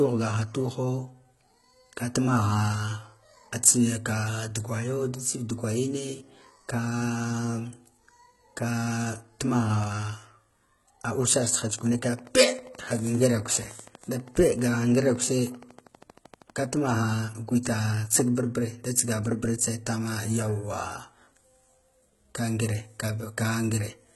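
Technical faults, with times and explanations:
Throughout: HE-AAC compression. The whole clip likely went through HE-AAC v2 at a low bitrate, with heavy codec damage. Only the lower spectrum is really coded. The treble is rebuilt by copying lower bands upward, so its harmonics fail to line up with those below, and s sounds come out gritty, metallic or lispy. On a spectrogram the upper band looks like a smeared, patchy copy of the lower one, and nothing shows above 11.8 kHz.
11.46 to 16.75 s: train of clicks. A regular ticking runs at 12.5 clicks per second, roughly seventy in all, with peaks around the level of the speech itself. The pulses have much the same shape, and they go on through pauses as well as under the speech. That points to outside injection, likely interference or a faulty connection or power supply. A waveform shows evenly spaced spikes about 80 ms apart, and a spectrogram shows matching thin vertical lines across the band.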